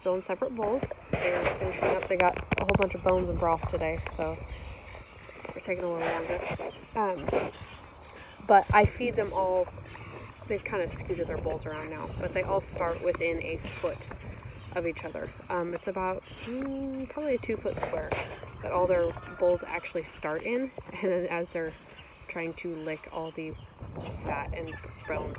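No technical faults can be heard; the audio carries the narrow telephone bandwidth of a call path, with nothing above 4 kHz, consistent with G.711 mu-law coding at 64 kbps.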